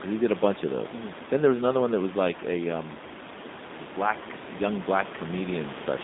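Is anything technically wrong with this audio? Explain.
Yes. Throughout the speech, the sound is rough and slightly synthetic, and it is confined to a narrow band from about 200 Hz to 3.7 kHz, with no air or sibilant detail above. This is G.729 codec damage, and it is plainly audible. The audio was rebuilt from a vocal-tract filter, a pitch predictor and a few pulses in each 10 ms frame rather than carried as a waveform, which fits an 8 kbit/s G.729A stream. The room noise, about 11 dB below the speech, passes through the same coding.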